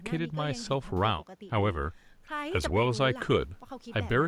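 No technical faults can be heard anywhere in this speech recording. Nothing in the sound points to a problem at any stage of capture or playback.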